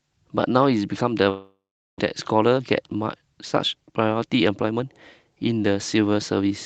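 A long network dropout is the likely cause of the gap from 1.29 to 2.02 s: the speech smears into a decaying buzz, then about 390 ms of silence, and roughly 400 ms of speech never returns. The delay shifts by about 300 ms.

Jitter buffer speed-up follows at 2.33 to 3.31 s (107%, about 70 ms removed), 3.75 to 4.80 s (109%, about 100 ms) and 5.30 to 6.19 s (109%, about 100 ms). Repeated trimming of pitch periods drains the excess buffer, so the speech sounds hurried at unchanged pitch.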